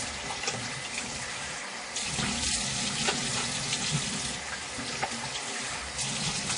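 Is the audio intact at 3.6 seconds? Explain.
No. At 3.6 s the sound carries the WMA compression heard across the whole clip, and it is plainly audible. Its ringing, washy texture and a hiss that swells and fades with the signal point to a transform codec, likely WMA, spreading quantisation noise over long blocks. Nothing remains above about 10.1 kHz, which fits roughly 32 kbps. A plain low-pass filter would dull the top just as much but leave no smeared, breathing noise.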